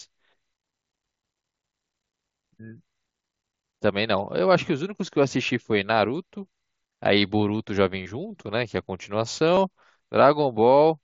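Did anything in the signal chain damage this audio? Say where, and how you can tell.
Yes, on the Bluetooth link between headset and phone: concealed Bluetooth headset packet loss at 8.03 to 8.06 s (30 ms) and 9.55 to 9.57 s (22.5 ms), consistent with runs of about four and three lost 7.5 ms frames. The receiver filled each gap by repeating a matched slice of recent waveform, so you hear a brief buzzy, held tone and a slight warble as real audio resumes. The waveform shows periodic repeated cycles at steady level, and the spectrogram shows smeared horizontal harmonic stripes under the light mSBC grain.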